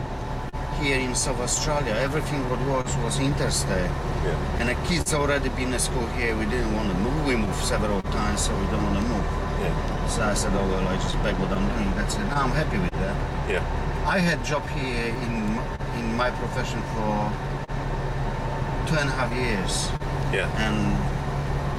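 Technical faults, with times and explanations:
Throughout: clock drift between sender and receiver. The sending end's clock runs roughly one and a half percent slow, so the jitter buffer keeps draining and the receiver has to keep stretching or repeating little slivers of sound to keep up. You get small timing hiccups scattered through the whole clip, never on a regular beat, which is the giveaway that it's two clocks slowly slipping apart rather than one bad moment.
0.49 to 5.09 s: scattered short gaps. Around five packets went missing or arrived too late across this stretch, and the receiver papered over each hole by carrying the previous sound forward. The longest patch is about 40 ms and the patches add up to roughly 150 ms, about 3% of the span, so it stays clear but picks up brief ticks and smeared bits.
8.01 to 8.07 s: short stall from a late packet. A packet wasn't there when it was due, so the buffer ran dry and the receiver held the last sound for 31 ms until it showed up, then picked up right where it left off. 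Nothing's actually lost. The delay just steps up by 31 ms, and you hear one sound hang on a touch too long with a faint buzzy or dipped quality.
9.96 to 15.81 s: scattered short gaps again, more of them this time, around ten, but each one small. The longest is about 30 ms and the total concealed is roughly 100 ms, about 2% of the stretch, so it's a sprinkle of tiny hiccups and smears rather than anything that breaks up the sound.
17.64 to 21.78 s: scattered short gaps, a final run of about four. The longest is around 30 ms, with roughly 70 ms filled in altogether, again about 2% of the span, each patched by extending the preceding sound, so you get a few more quick ticks and blurs right to the end.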